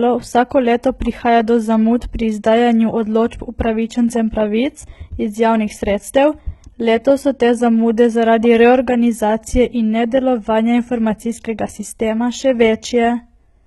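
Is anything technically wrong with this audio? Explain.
Yes. The speech shows heavy HE-AAC compression from start to finish, likely from a low-bitrate stream around 16 kbps. The codec spends its bits on the lower spectrum and synthesises the treble by copying lower bands upward under a rough envelope. Nothing survives above 11.8 kHz, and the rebuilt top end sounds artificial: sibilants come out gritty and lispy, with a metallic sheen where the copied harmonics fail to line up with the real ones.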